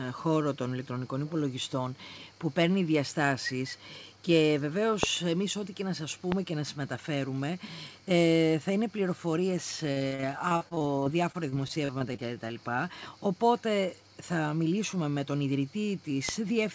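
At 5.03–5.05 s and again at 6.32–6.34 s there is a loud pop, each a single sharp click roughly 20 dB above the surrounding sound, which continues beneath it. A sudden electrical pulse, likely from a switch, static or a driver glitch, is the cause. On a waveform each appears as a narrow spike, and on a spectrogram as a thin vertical line spanning all frequencies.

From 9.92 to 12.57 s, repeated packet loss gives the sound a choppy, robotic character. Roughly two dozen short dropouts, the longest about 44 ms, are patched by stretching the preceding sound, and that stretching covers about a fifth of the stretch. The spectrogram shows smeared, repeated slices broken by brief gaps, and the waveform shows a stuttering envelope.

At 16.29–16.31 s a third loud pop lands, about 25 dB above the signal. It is a single spike on the waveform and a full-band vertical streak on the spectrogram, and it too is likely caused by a voltage pulse.

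The call path itself carries nothing above 8 kHz, which fits the G.722 codec.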